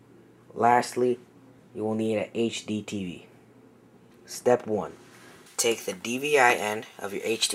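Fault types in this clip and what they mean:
Pre-emphasis left on: the treble was boosted for transmission, and the matching cut on playback never happened. It affects the last stretch of the clip, from about 5.46 s to the end. There the highs sit about 11 dB hotter at 10 kHz than at 1 kHz. The tilt fits a J.17-style emphasis curve. The sound turns thin and glassy, with hissy, spitting sibilance and little body underneath.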